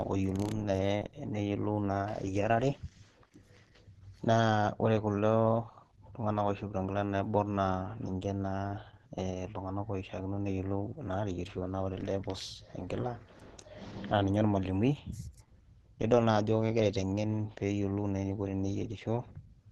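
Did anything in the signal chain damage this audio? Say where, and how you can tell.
Yes, at the codec stage. Plainly audible compression damage runs through the whole speech clip, likely from Opus compression. Nothing sounds above 12.1 kHz. The speech is muffled and hoarse, which fits the hybrid speech mode at a low bitrate near 16 kbps.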